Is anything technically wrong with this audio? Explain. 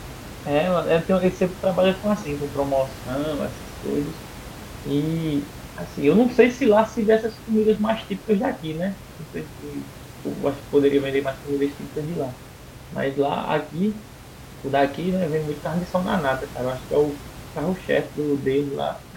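No, nothing is technically wrong with this audio.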